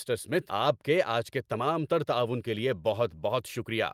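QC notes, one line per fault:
0.49 to 0.51 s, skip ahead: the speech jumps straight forward here, with roughly 0.4 s of audio simply gone and nothing filled in. The receiver had later audio already queued, so it dropped the stretch in between, either lost in transit or thrown out when the jitter buffer overflowed. The two sides butt together almost directly, so you hear a sudden lurch rather than a gap or a dropout.
0.59 to 3.01 s, jitter buffer speed-up: right after the jump, the speech runs at about 109% of normal speed while the pitch stays put, so the talker sounds a bit rushed. The buffer was still holding more audio than it wanted, so the receiver repeatedly snipped out tiny pieces a pitch period or so long to drain the backlog. Across this stretch that trims roughly a fifth of a second.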